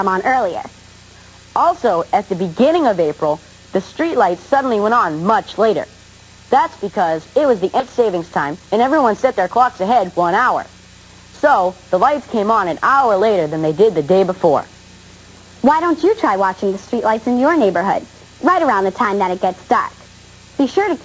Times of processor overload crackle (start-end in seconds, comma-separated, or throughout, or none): none